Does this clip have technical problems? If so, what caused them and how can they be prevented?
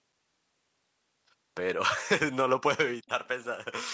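Yes, there's an echo leak from 3.06 to 3.28 s: a very faint copy of the speech about 498 ms late, likely speakerphone audio slipping past the echo canceller. A headset on the far end, or a better-tuned echo canceller, would keep it out.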